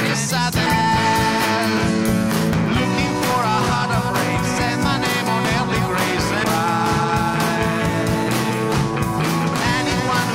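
A CD skip occurs at 6.44 s: a jolt or surface flaw knocked the laser onto another turn of the disc's spiral, so playback mutes for only a few milliseconds, leaving a small tick, and resumes abruptly from a different point in the audio.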